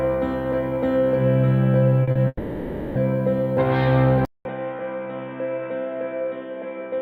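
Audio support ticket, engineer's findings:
Short concealed packet loss, 2.03–2.10 s and 2.11–2.18 s. Two brief smears in the music, about 40 ms of audio missing each time. Receiver-side concealment extended the preceding sound across each gap, then cross-faded back into real audio. Jitter buffer or transport losses.

Long network dropout, likely cause, 2.27–2.98 s. Music holds as a fading buzzy continuation for roughly 0.7 s, with about 30 ms of silence, then resumes further on with that section gone. Decoder concealment filled the gap until real packets returned.

Input switched to a poorer device, likely cause, 4.25 s to end. A 200 ms silence at the switch, then the music turns dull and narrow with nothing above 3.8 kHz. Level drops by roughly 10 dB, with a new noise floor about 35 dB under the signal. Capture device change, possibly a headset call profile.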